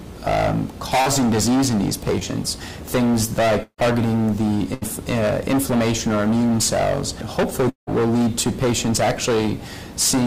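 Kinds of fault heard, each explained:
Hard clipping: The signal is driven about 22 dB past what one stage can pass, so roughly a fifth of the samples are flattened. The result is a constant harsh fuzz on all loud sound, not the occasional crackle of light overload.
Short concealed packet loss: Twice, near 1.01 to 1.08 s and 2.20 to 2.23 s, about 40 ms and 20 ms never arrived. The receiver extended the preceding sound to cover each gap, heard as a brief smear rather than a held buzz or audible hole.
Burst of packet loss: At 3.63 to 3.80 s about 160 ms is lost, with a continuation fading to roughly 90 ms of silence. At 4.74 to 4.83 s, 80 ms goes. Both are longer than the smears, and sound resumes further on.
Long network dropout: At 7.69 to 7.89 s a fading continuation gives way to about 130 ms of silence within a 175 ms fill, and 180 ms of sound is gone. This is likely a network dropout.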